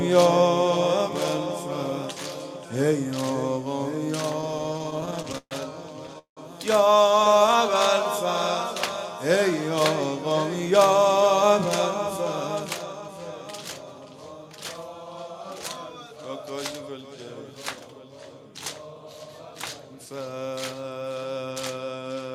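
From 4.41 to 6.39 s, packets kept arriving late, so the jitter buffer ran dry 22 times. The receiver stretched the last sound across each gap, about a quarter of that span, up to 181 ms at once. The result is repeated stalls (stutter): dragging, halting audio with nothing lost.

Between 7.11 and 7.96 s, the buffer was low or had just raised its target delay, and a jitter buffer slow-down rebuilt its reserve by repeating single pitch periods, adding 43 ms. Playback runs at 96% speed without any shift in pitch. Inside it, from 7.20 to 7.54 s, there are six more brief stalls of at most 10 ms.

From 10.71 to 13.09 s, the buffer held too much audio, and a jitter buffer speed-up trimmed about 150 ms of short pitch-period pieces. The sound runs at 106% speed with unchanged pitch, giving a slightly hurried feel.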